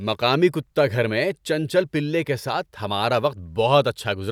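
Speech, with no technical faults.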